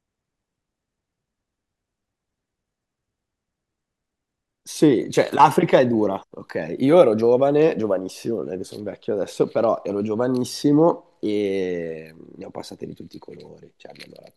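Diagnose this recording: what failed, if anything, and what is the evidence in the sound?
Nothing failed: the recording has no fault to diagnose and no evidence of one in the sound.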